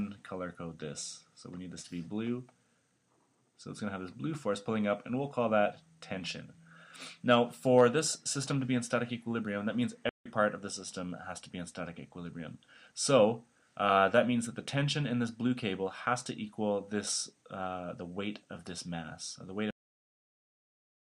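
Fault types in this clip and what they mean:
Playback stall: The player was likely starved of data or had its output thread blocked for a moment, so nothing reached the output until it caught up. In this clip the sound halts abruptly in mid-flow at 10.09 s and stays silent for about 0.16 s, until 10.26 s, before the audio comes back. The gap is long enough to register as a hitch, not as a click.
Cut-off end: The final buffers of the stream were never written out or played, so the recording ends before the sound itself finishes. Here the audio stops dead at 19.71 s, in the middle of whatever is sounding, and drops straight to digital silence with no natural decay or fade. The silent remainder runs to the end of the file, leaving the last moment of sound truncated.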